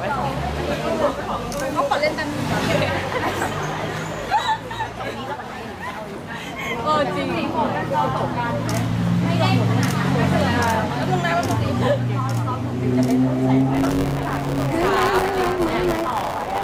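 From 13.73 s to the end, buffer tearing adds a 100 Hz rattle. Writer and reader slipped, so each buffer holds a slice of older audio.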